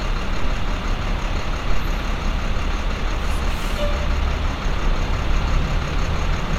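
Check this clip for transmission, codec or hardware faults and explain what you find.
Nothing to flag here: listening through the whole clip, there's no sign of any transmission, codec or hardware trouble at all.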